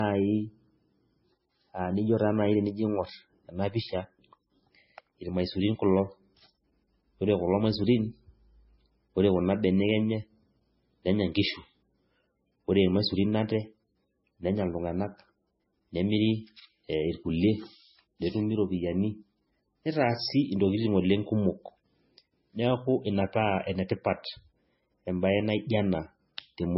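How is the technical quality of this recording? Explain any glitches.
The quality is poor throughout the speech. Dull, band-limited sound with nothing above 5.6 kHz and smeared, watery artefacts, likely low-bitrate audio saved at a high bitrate: a very low-bitrate MP3 re-encoded at a high rate, which cannot restore what was lost.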